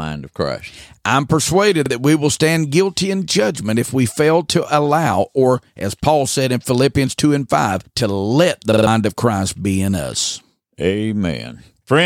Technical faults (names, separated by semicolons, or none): repeated buffer